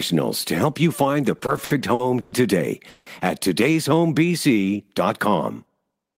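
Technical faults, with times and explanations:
1.38–2.33 s, repeated stalls (stutter): the sound halts six times, each pause filled by stretching the last sound, the longest about 120 ms and 270 ms in all. Late packets kept draining the jitter buffer, so nothing is lost, but the flow drags.
2.89–3.07 s, call audio freeze: the sound hangs for 170 ms as a continued, fading sound with no silence, then picks up where it stopped, 170 ms later than before. The likely cause is packets delayed in transit emptying the buffer.
3.89–5.30 s, jitter buffer slow-down: the audio plays at 90% speed with pitch unchanged, drawing sounds out and adding 153 ms. The receiver repeated single pitch periods and bits of pauses to rebuild its buffer reserve, which stretches the timing without lowering the pitch.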